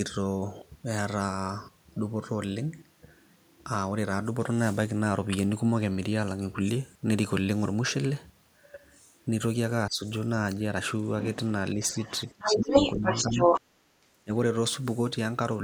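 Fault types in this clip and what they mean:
speech suppressed in double talk: The talker's speech sinks in short pockets at 9.88, 11.74, 12.31, 12.93, 13.78 and 14.0 s, from a slight dip to a near-cutout of around 30 dB, most likely because the echo canceller turned down everything while both sides spoke. On a spectrogram the harmonic bands fade or blank out in brief vertical gaps. On the waveform the envelope pinches abruptly, each dip lasting under half a second.
other side's voice leaking through: From 11.82 to 13.61 s a second voice sits over the talker at about 5 dB above the main speech, likely because the canceller did not fully remove the loudspeaker signal from the microphone. Overlapping this stretch, the talker's own speech is pushed down. On a spectrogram a second, unrelated set of harmonic stripes runs alongside the first. On the waveform there is extra energy where pauses would otherwise fall.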